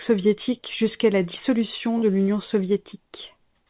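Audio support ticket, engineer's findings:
Short concealed packet loss at 1.98 to 2.04 s, right after "soviétique jusqu'à la dissolution": a quick smear where about 40 ms went missing and got patched by extending the previous sound. Likely jitter buffer or network. Band stops near 4 kHz, which fits G.711 mu-law.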